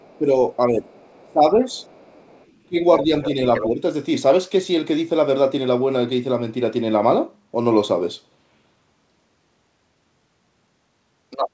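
A second voice sits under this speech clip, very low from 0.0 to 0.17 s (about 35 dB down), clearer from 0.9 to 3.67 s (about 15 dB down), and nearly level with the talker from 11.3 to 11.49 s (about 5 dB down). This is other side's voice leaking through, likely loudspeaker echo the canceller failed to remove from the microphone. Overlapping that, the talker's own voice dips and breaks up from 0.18 to 1.8 s and again from 2.67 to 3.82 s, dropping by as much as 20 dB for about 1.1 s in total. This is speech suppressed in double talk: with both sides talking, the canceller likely treated the talker as echo and pulled both down. Nothing is heard above 8 kHz, which fits the G.722 call codec.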